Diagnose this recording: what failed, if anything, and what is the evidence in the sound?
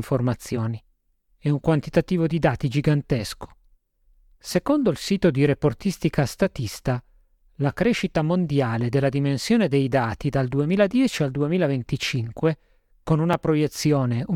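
A single sharp tick at 13.33 s, where the speech drops out for about 2.2 ms. This is a block of digital silence at the driver or buffer stage: a buffer went out as zeros, cutting abruptly in and out.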